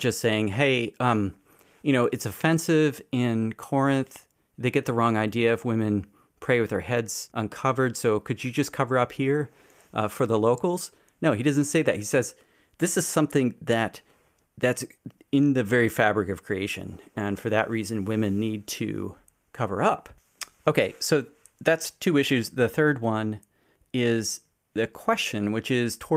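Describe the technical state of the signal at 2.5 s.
The signal is intact at 2.5 s, with no audible fault at that point in the speech.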